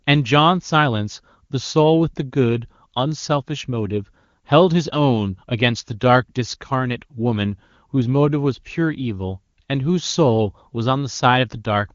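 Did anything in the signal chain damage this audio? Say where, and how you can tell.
No, the speech has been through an AMR wideband (HD Voice) codec at 23.85 kbit/s, its highest rate, where any coding damage is faint at most, and no stage of the chain leaves an audible fault.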